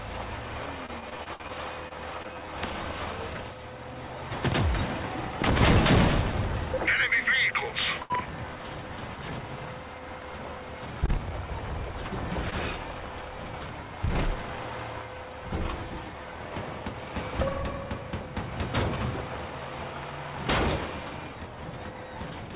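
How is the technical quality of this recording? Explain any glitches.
The recording has clear transmission faults concentrated in the first few seconds, plus three brief hold-ups later on. The band stops at 4 kHz, which fits a narrowband G.711 A-law call path at 64 kbps.

Repeated packet loss (robotic sound), 0.86 to 2.26 s: nine separate gaps occur in this stretch, the longest 60 ms. The receiver bridges each one by extending the previous sound, for 218 ms of filled audio in total, about 16% of the span. Roughly 120 ms of real content is gone for good. Because the gaps come in quick succession, the sound turns choppy with pieces missing.

Jitter buffer slow-down, 1.18 to 2.47 s: running short of buffered audio, the receiver repeats individual pitch periods and fragments of pauses to rebuild its reserve. It adds 49 ms over this window, so playback runs at about 97% speed while the pitch stays unchanged. 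Sounds are drawn out slightly, and this overlaps the loss burst.

Jitter buffer speed-up, 1.51 to 6.7 s: the buffer then holds more audio than its target, so the receiver trims short pitch-period pieces repeatedly. Around a tenth of a second is removed across the span, giving roughly 101% speed at the same pitch. The change is small.

Short stall from a late packet, at 8.02 to 8.12 s, 11.06 to 11.10 s and 12.50 to 12.54 s: each time a packet arrives late, the buffer empties and the last sound is held until the packet arrives, after which playback continues from the same point with nothing lost. The holds last 78 ms, 20 ms and 20 ms, raising the delay by the same amounts. The first is the longest hold; the other two are brief.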